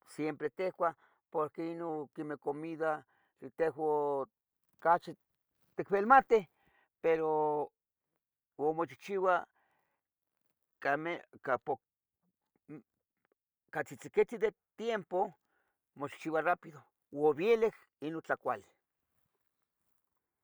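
Speech recording with two drift correction steps, where playback rate jumps abruptly and later snaps back. From 0.48 to 1.89 s the audio runs 5.83% fast and rises about a semitone; from 11.14 to 11.69 s it runs 5.83% slow and drops about a semitone. This likely comes from clock-matching software adjusting its buffer. On a spectrogram, harmonics shift up or down as a block at each boundary; the waveform shows compressed or stretched periods.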